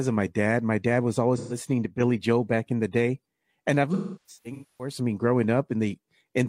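At 1.37 s, just after "dad was", there is AAC frame loss with concealment. About 128 ms of audio goes missing, which fits three lost frames. The decoder covers the gap by reusing the last good spectrum with altered phase. The result is a brief smeared, phasey patch lasting until 1.57 s.

From 1.86 to 2.00 s the level falls abruptly by about 6 dB, then recovers. The likely cause is one channel dropping out. With only one side left, the mono sum carries half of the shared signal, so the sound quiets.

A second AAC frame loss with concealment runs from 3.93 to 4.94 s. It follows "the day and I've" and ends before "I mean". About 725 ms is lost in gaps scattered across roughly 850 ms. The longest run is around 300 ms. The repeated concealment gives a broken, noisy, smeared stretch.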